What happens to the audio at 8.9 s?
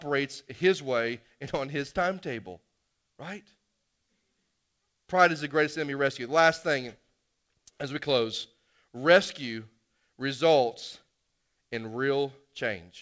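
Nothing goes wrong at 8.9 s: the speech there is intact, carried through the call path with its usual wideband coding, with no content above about 8 kHz, which fits G.722.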